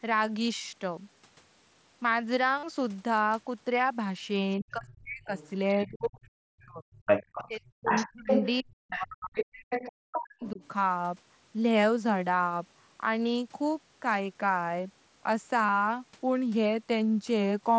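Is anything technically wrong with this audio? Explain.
Yes. Three kinds of fault are audible in this speech.

Concealed Bluetooth headset packet loss occurs at 2.58–2.63 s, 12.39 s and 15.67–15.69 s. The 45 ms gap at 2.58 s, which fits about six lost headset frames, is filled by repeating the last stretch of waveform. It becomes a brief buzzy held tone with a small warble as the real signal returns. The shorter losses, about 15 ms and 22.5 ms, are briefer runs of the same. Unlike a dropout, the level never falls.

Speech suppressed in double talk appears at 4.59–6.88 s, 7.46–9.33 s and 9.88–10.61 s. The talker's voice dips by up to about 40 dB. This is likely an echo canceller turning everything down while both sides spoke. Unlike packet loss, the voice fades rather than buzzing.

The other side's voice leaking through is heard at 4.88–5.5 s, about 25 dB below the talker, at 6.6–9.89 s, at about equal level, and at 10.43–10.68 s, about 20 dB down. 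A second voice is present, likely loudspeaker echo the canceller left in. It adds a voice, whereas suppression removes one.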